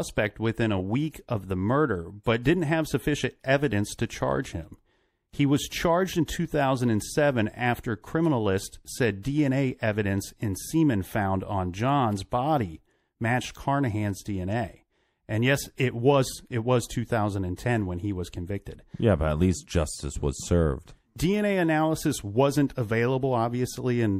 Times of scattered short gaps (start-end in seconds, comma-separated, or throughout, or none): none